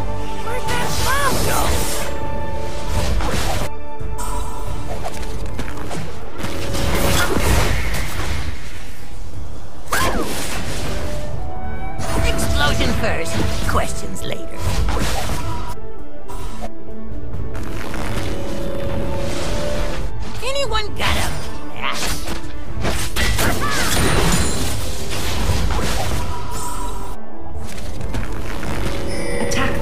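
DC offset runs through the whole clip, from start to finish. The entire waveform sits displaced from the zero line by a constant amount, about -16 dBFS, so every sample carries the same fixed bias. The ear doesn't register this as a sound of its own, but it eats into the available headroom on one side of the waveform and appears as a steady, unchanging component at 0 Hz, the very bottom of the spectrum.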